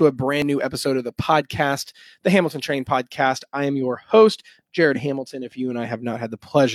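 At 0.42 to 0.44 s, just before "new episode of the", then at 1.42 to 1.45 s after it, and at 4.36 to 4.40 s after "I am your", there is an overlap between stream segments. The 1 s segments have overlapping timestamps. The player trims 20 to 40 ms of real audio, so the waveform jumps. Each one is heard as a brief click or skip.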